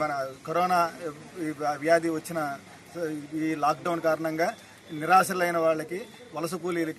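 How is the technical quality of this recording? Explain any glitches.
Listening closely, nothing in the recording stood out as a glitch or technical problem.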